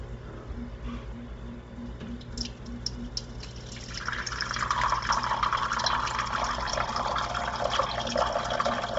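Throughout, the sounds stop at 7.7 kHz, and the top of what remains has a grainy, breathy hiss, likely Bluetooth LC3 compression. Unlike a plain low-pass filter, that band is noise-filled rather than dull. Its fine grain fits 7.5 ms frames at a low bitrate.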